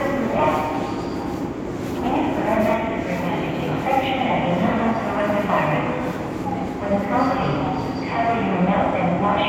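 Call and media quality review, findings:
Audio missing between chunks, 2.73 s and 6.68 s: abrupt skips of about 50 ms, joined with no gap; likely lost at 4-second chunk boundaries in the recorder.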